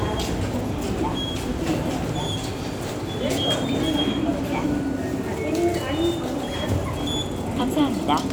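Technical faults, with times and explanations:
No technical faults can be heard in this recording of sounds. There is nothing here that needs a time or an explanation.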